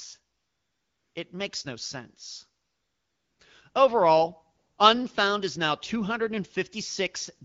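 AMR comfort noise fills the pauses at 0.37–1.15 s, 2.65–3.39 s (after "makes no sense"), 3.71–3.73 s and 4.57–4.77 s. Speech frames stop, and the receiver substitutes a steady, smooth synthetic hiss that switches in and out. On a spectrogram these spans appear as flat, featureless noise bands with abrupt edges.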